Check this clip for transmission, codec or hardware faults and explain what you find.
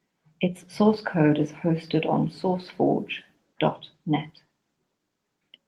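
Nothing stood out when listening to this speech clip.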